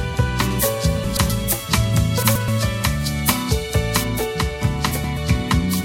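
From 0.51 s to 4.04 s the treble rises sharply. The top end sits about 8 dB above the 1 kHz level at 10 kHz, so the audio turns thin, bright and hissy at the sibilant edges. This is pre-emphasis left on: a treble lift was applied and the matching de-emphasis cut never followed. The shape fits the CD 50/15 µs curve. A broad treble EQ boost would not switch in and out so abruptly, or follow that fixed shelf.

Inside that stretch, from 1.04 to 1.30 s and again from 2.23 to 2.48 s, the sound briefly garbles into a flutter. The same thing happens once more from 4.91 to 5.17 s. Each is a case of frames out of order: two adjacent blocks of about 128 ms each, consistent with runs of four frames, were decoded in swapped order. The halves play back to front. Unlike a dropout or a repeat, nothing is missing or duplicated and no time is lost.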